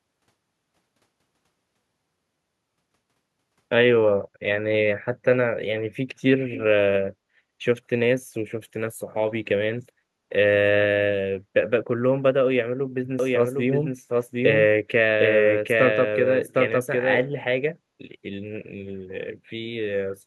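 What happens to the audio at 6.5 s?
At 6.52 to 6.6 s a brief echo leak appears: a faint, delayed copy of the speech, trailing it by 279 ms and sitting well below it, roughly 15 dB down. The likely cause is a far-end loudspeaker whose echo canceller let part of the microphone pickup slip back into the call. Unlike room reverberation, which smears continuously, this is a discrete repeat at a fixed lag, heard only as a short scrap.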